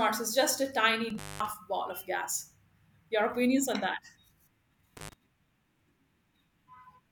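At 1.1 to 1.5 s, just before "ball of gas", the speech cuts out for about 0.21 s in an intermittent contact: a loose plug or cable briefly opens the circuit. A shorter break follows at 4.97 to 5.13 s, open for about 0.08 s. Each gap is framed by crackle as the contact scrapes apart and back together, and faint hiss stays underneath. That edge crackle and residual hiss distinguish it from a clean digital dropout, which falls to silence.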